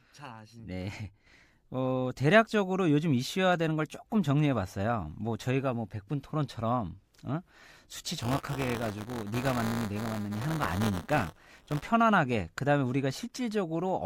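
A speech recording with buffer tearing from 8.21 s to 11.90 s. The playback write position and the hardware read position have slipped and now cross inside each period, so about a tenth of every buffer replays audio from roughly 20 ms earlier, with hard splices at both edges. Those splices repeat at 200 Hz, a 5 ms period, which produces a steady robotic buzz riding on the speech that is heard only while sound is present.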